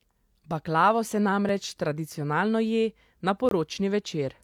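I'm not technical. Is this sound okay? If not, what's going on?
No. The speech drops out briefly at 1.49 s and from 3.49 to 3.51 s. This is a gap between stream segments: the player fills missing time with silence.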